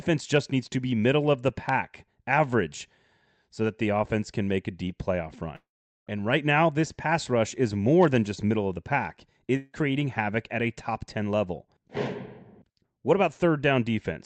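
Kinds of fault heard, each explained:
Long network dropout: After "deep playoff", the sound breaks at 5.55 s and returns at 6.09 s. The last sound carries on briefly as a fading buzz, then goes quiet for about 0.42 s. At 9.57 s, between "middle of the pack" and "havoc at a top", a 0.18 s gap is bridged entirely by that fading fill, with no silence. In both places, audio likely never reached the receiver, and the lost portion is simply skipped.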